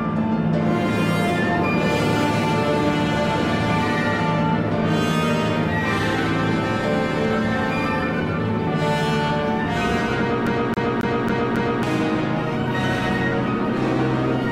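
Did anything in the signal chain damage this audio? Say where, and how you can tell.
Yes: a CD stuck on one turn from 10.47 to 11.83 s at playback, where a scratch keeps throwing the laser back, repeating the same 273 ms five times with brief mutes.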